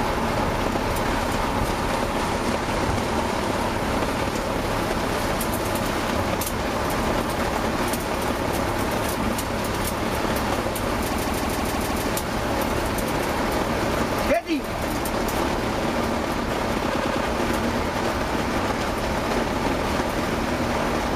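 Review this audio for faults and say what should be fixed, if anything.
Repeated frames: from 11.12 to 12.06 s a 156.7 ms block plays six extra times, and from 16.92 to 17.23 s a 104.5 ms block three extra times, showing as identical tiled patterns on a spectrogram. To prevent it, make the encoder and transport path write or send each compressed frame exactly once.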